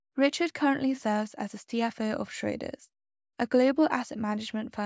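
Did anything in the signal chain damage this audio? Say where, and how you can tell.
No, no signal-chain damage audible.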